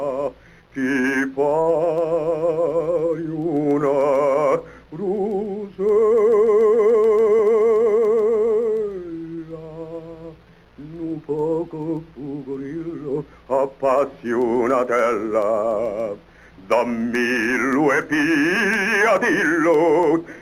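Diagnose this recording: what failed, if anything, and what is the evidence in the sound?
Three short stalls from late packets, so this is a network problem hitting the receiver's jitter buffer. Around 1.01–1.06 s, 1.62–1.67 s and 9.35–9.39 s the sound hangs for a moment, held about 32 ms, 37 ms and 18 ms respectively, with a faint buzz or dip. Each time a packet showed up late, the buffer ran dry, the receiver stretched the last bit of audio to cover the gap, then picked up exactly where it left off. Nothing's lost; the timing just shifts later by those amounts.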